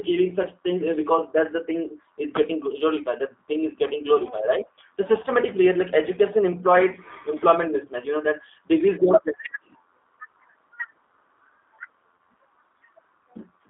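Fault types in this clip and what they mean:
G.729 codec: A low-rate speech codec that rebuilds the signal from a vocal tract filter, a pitch predictor and a sparse set of pulses, rather than carrying the waveform itself. Here the damage is plainly audible throughout. The sound is confined to a band of about 250 Hz to 3.6 kHz, consistent with an 8 kbit/s telephone-grade coder, and it carries the slightly rough, synthetic texture of pulse-excited reconstruction in place of natural detail.
VoIP packet loss concealed by the speech codec: A brief gap in the incoming stream, filled by the decoder extending its last pitch and filter state at falling gain. The gap lasts 20 ms, from 12.17 to 12.19 s, and its length fits a single lost packet. Across the gap the speech is replaced by a short stretched continuation of the last sound, fading as the gain drops. Because each frame is predicted from the one before, the speech stays weakened or smeared for a short time after the stream resumes.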